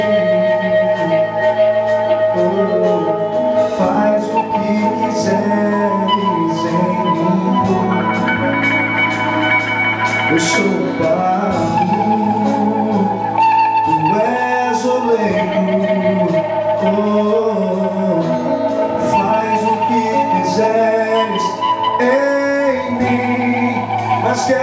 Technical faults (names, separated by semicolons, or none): none